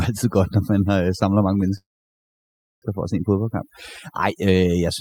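Speech runs through overdone noise removal for its whole length. The reduction has been pushed so hard that individual frequency bands near the noise floor are cut almost entirely, and the quieter components of the speech go down with them. The background drops and breaks up into twinkling specks. From 1.77 s to 2.84 s there is a call audio freeze. The sound stops for about 1.05 s, nearly all of it (about 0.99 s) plain silence. The most likely cause is delayed packets leaving the receiver's jitter buffer empty, so the gap is inserted rather than cut out. When the audio resumes it picks up where it stopped with nothing lost, and everything after 2.84 s runs about 1.05 s later than it would have.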